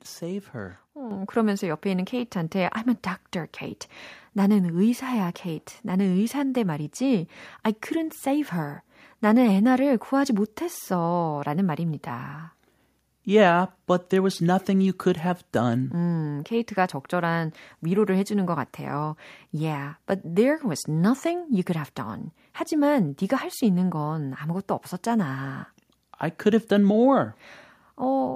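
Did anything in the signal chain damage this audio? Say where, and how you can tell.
Yes. In call processing, automatic gain control judged the microphone too quiet and performed a microphone volume step-up at 1.11 s, raising the device's input volume by about 7 dB at once. The voice and the background noise jump up in level together, which points to an input gain change.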